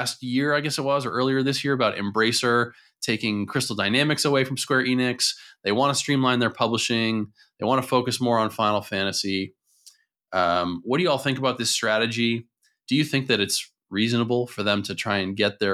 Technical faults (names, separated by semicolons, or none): none